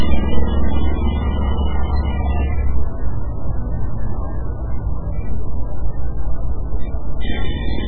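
Likely heavy MP3 compression at a very low bitrate, around 8 kbps, throughout: nothing reaches above 4.2 kHz, and weak detail swirls watery and smeared.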